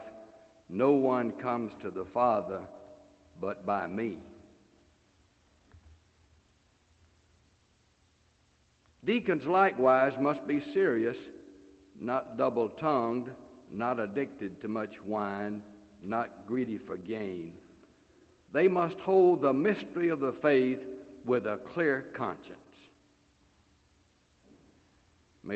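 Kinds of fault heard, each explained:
No kinds of fault are heard, so there is none to explain.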